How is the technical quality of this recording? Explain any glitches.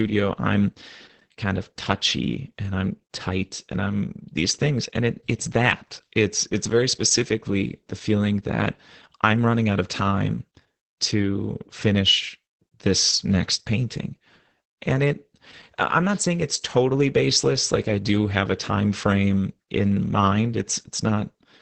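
The recording has one problem that runs the whole way through: heavy Opus voice compression. The speech has been squeezed through Opus's SILK linear-prediction coder in wideband mode, so nothing above about 8 kHz survives. Coarsely coded excitation leaves the voice muffled, a bit hoarse and faintly robotic, with dull consonants and no air on top. Damage this heavy points to a very low bitrate, something around 10 kbps.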